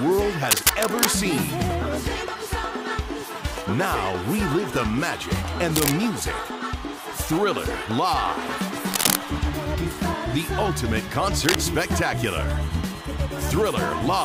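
Cable scratch noise breaks in at 0.48–1.15, 5.76–5.92, 8.92–9.18 and 11.40–11.57 s. It's harsh rustling, as loud as the sound and louder at 8.92 s, likely from a worn contact being moved.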